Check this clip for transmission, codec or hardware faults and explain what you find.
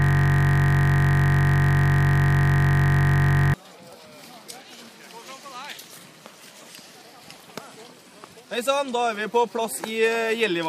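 One fault is present: a system hang loop. It is already under way when the clip begins and lasts until 3.54 s. A single 21.33 ms slice of audio repeats exactly, about 165 times. The system froze, but the sound hardware kept replaying the same stretch of its ring buffer. The loop length fits a 1024-sample buffer. Because the slice is so short, it comes across as a steady, mechanical buzz at 46.9 Hz rather than a stutter.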